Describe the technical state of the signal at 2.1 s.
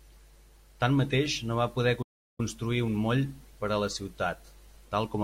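At 2.1 s the speech is inside a playback stall running from 2.02 to 2.40 s: the output goes fully silent for about 364 ms mid-flow, likely because the player ran out of data or its thread was blocked. Unlike a brief dropout or click, the silence lasts just over a third of a second.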